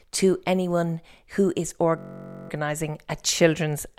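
Just after "to anyone who is", from 1.98 to 2.50 s, the speech collapses into a system hang loop. The driver stalled while the hardware kept replaying one 21.3 ms slice of its ring buffer, which fits a 1024-sample buffer, about 24 times. The exact repetition turns into a steady, pitched buzz near 47 Hz, not a dropout or an uneven stutter. Essentially no speech goes missing afterwards.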